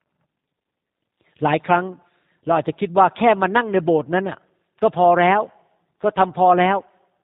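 G.729 codec damage runs through the whole clip, and it is plainly audible. The speech has been squeezed through a low-rate voice coder that discards the waveform itself and keeps only a vocal tract filter, a pitch predictor and a few pulses per 5 ms subframe, which fits the 8 kbit/s G.729A variant. Everything above 4 kHz is gone, so consonants lose their edge, and the rebuilt voice sounds rough, buzzy and faintly synthetic.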